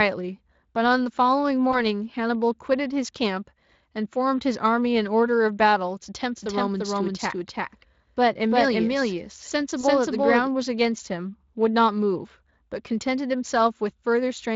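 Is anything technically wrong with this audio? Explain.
Yes. At 1.71 s and again at 9.81 s, a packet went missing and the speech codec concealed the gap, which fits a single lost 20 ms frame each time. The decoder stretched the last sound from its pitch and filter, so each spot turns briefly into a buzzy tone or coloured noise that fades, and the voice stays weak or distorted for a short while afterward.

From 6.35 s to 10.47 s there is a doubled audio track. The same speech appears twice, most likely because a second, slower capture path or an out-of-step edit mixed in another copy. It trails by about a third of a second at roughly equal loudness, with no room colour, and it starts and stops abruptly. The second concealment gap falls inside this stretch.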